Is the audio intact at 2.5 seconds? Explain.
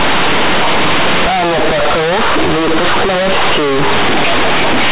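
No. At 2.5 seconds, as throughout, mu-law companded audio is read as linear 8-bit without expansion. Quiet passages blow up, giving loud, buzzy distortion and heavy noise.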